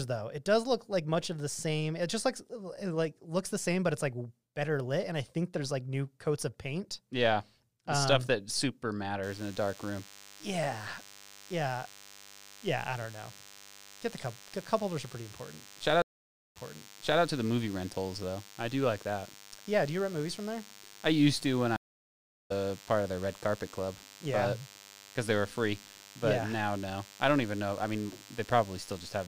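From 9.23 s, right after "um stuff that super", a nearby DECT cordless phone or base station is sending its radio burst every 10 ms, and the audio circuitry rectifies that energy into the signal. The result is a DECT cordless phone buzz: a steady, thin, harmonically rich drone at 100 Hz, sitting roughly 20 dB below the speech. It never lets up and runs to the end of the clip.

At 16.02 s a stream reconnect occurs. The connection drops, the player goes silent for about 0.54 s, then reconnects and starts a fresh decoder. Because the server resends a burst, playback resumes 0.68 s earlier, so a stretch of speech is heard twice. A second reconnect at 21.76 s brings 0.74 s of silence, and this time the stream picks up roughly half a second later, so that stretch of speech is skipped entirely.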